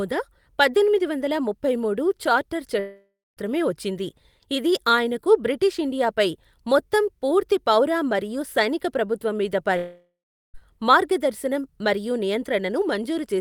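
At 2.79 s, right after "వందల ముప్పై మూడు చార్టర్", the speech cuts out for about 0.6 s. The last sound smears into a fading buzz, drops to near silence for roughly a quarter second, then picks up at 3.39 s on "వచ్చింది ఇది ఆయనకు బ్రిటీష్" with that chunk simply gone. The same thing happens from 9.77 to 10.56 s after "మరియు సైనిక ప్రభుత్వం మీద", which is longer at nearly 0.8 s and has more dead air. Both are likely a long network dropout, where the receiver papers over lost audio until the stream returns.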